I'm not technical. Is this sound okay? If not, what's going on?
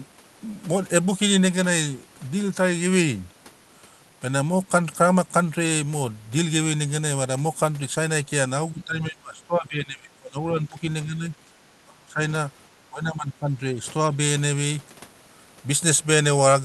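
No. From 8.72 to 10.83 s, then 11.06 to 11.52, 11.8 to 12.2, 12.87 to 13.54 and briefly at 14.1 to 14.17 s, the speech keeps sinking and cutting out in chunks. That's speech suppressed in double talk. The likely cause is someone on the other end talking at the same moment: the call's echo canceller couldn't tell this voice apart from its own speaker's echo, so it turned everything down. The deepest drops are in the first and third stretches.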